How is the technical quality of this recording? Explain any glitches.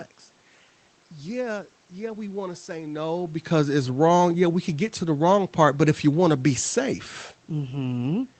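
No technical faults are audible.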